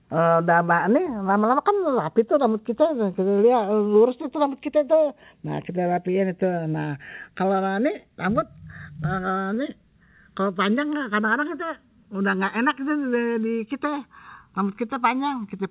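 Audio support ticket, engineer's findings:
Slow flanging throughout: channels drifting apart. The two sides sit on separate clocks, off by something like 50 ppm, so the inter-channel delay creeps to around a millisecond by the end and the comb notches sweep.

Sound held too long, slight buzz or dip, 9.54 to 9.58 s: short stall from a late packet in the jitter buffer of the G.711 call path (band-limited, nothing above 4 kHz). The buffer ran dry, so the last sound was stretched 27 ms. Nothing is lost, but playout delay rises 27 ms.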